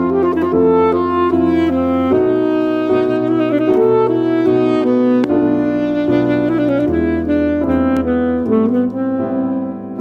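A loud pop hits from 5.24 to 5.26 s, well above the surrounding sound, and a weaker one follows from 7.97 to 7.99 s, each likely a voltage spike such as a switch or static discharge. Each shows as a sharp waveform spike and a thin full-band vertical stripe on a spectrogram.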